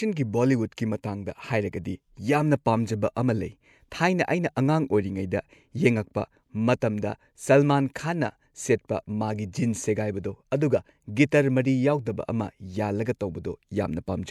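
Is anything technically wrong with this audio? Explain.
Yes, there are two kinds of fault in this speech clip. At 6.80 s there's pre-echo: the codec spread its quantisation noise across the whole block, so a short hiss leaks about 18 ms ahead of a sharp attack, softening and smearing its onset. Then at 7.44 s and 9.43 s you get two single sharp clicks. Those are most likely dropped samples, just a couple of samples missing each time, so the waveform jumps abruptly without losing any audible sound.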